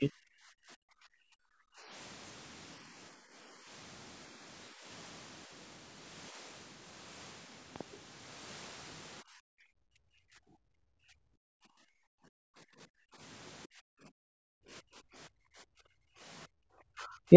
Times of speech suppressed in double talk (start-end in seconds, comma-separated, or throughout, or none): 0.00-1.93, 2.85-3.70, 4.70-4.85, 6.31-6.39, 9.22-13.21, 13.66-17.30